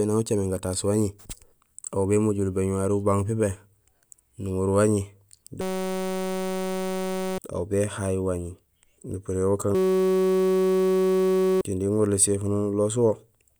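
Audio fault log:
5.61–7.38 s and 9.75–11.61 s, system hang loop: the speech gives way to a steady, harsh buzz at about 188 Hz, with roughly two seconds lost each time. The system froze while the hardware replayed one 5.33 ms slice, which fits a 256-sample buffer, hundreds of times over.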